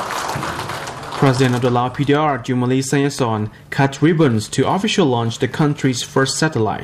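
At 3.19 to 3.21 s a single loud pop stands out well above the surrounding level, likely from a voltage pulse such as a switch, static or a driver glitch. Unlike a dropout, the sound keeps going underneath.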